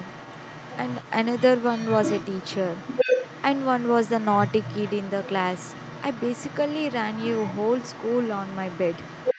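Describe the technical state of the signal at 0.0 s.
At 0.0 s, the other side's voice is leaking through, and it continues to the end at 9.4 s. A second voice sits well below the main speech, faint. The likely cause is an echo canceller that left part of the loudspeaker playback in the microphone signal.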